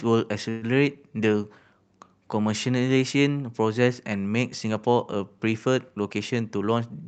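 At 0.49 s the speech stops moving forward and a fading buzz holds until 0.65 s. This is a call audio freeze. The likely cause is packets held up in transit, so the jitter buffer ran dry. The receiver stretched the last sound to cover about 124 ms. Nothing was lost. When the packets arrived the speech resumed where it had left off. So a gap was inserted, and everything after it lands that much later.

From 6.36 s to 7.03 s the speech runs hurried. This is a jitter buffer speed-up. Too much audio had built up in the buffer, and the receiver cut it back. It removed many short slices, each a pitch period or a few, one after another. Roughly a tenth of a second went in total. The speech plays at about 113% speed, but the pitch stays the same. The high end stops near 8 kHz throughout, which fits a wideband call codec such as Opus.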